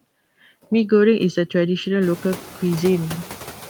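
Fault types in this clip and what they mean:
Noise suppressor artifacts: the suppressor cuts bands it reads as noise by about 6 dB, so the background dips between phrases and swells under the speech.
Channel delay (comb filtering): from 0.86 to 2.81 s, one channel lags by under a millisecond before the mono sum, notching from around 700 Hz and sounding hollow.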